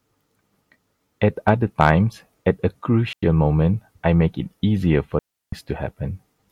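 From 1.48 to 1.90 s, the speech overdrives a stage by about 3 dB, producing hard clipping: its peaks are sliced flat, adding crackly, brittle edges. At 3.13 s and again from 5.19 to 5.52 s, a digital wireless dropout occurs as the link loses data and the receiver mutes, leaving clean silent holes of 97 ms and 335 ms with no noise burst.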